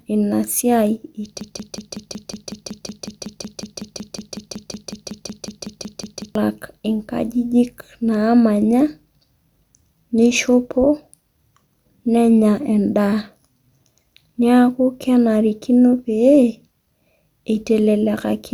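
Speech, with a broken-record loop from 1.41 s to 6.35 s. A fragment of about 185 ms repeats back to back, 27 times in a row. Each pass is identical, so the sound stutters mechanically for almost five seconds. Whatever should have been heard in that span is gone. The likely cause is a stalled player, encoder or stream that kept resending the last piece it held until data flowed again.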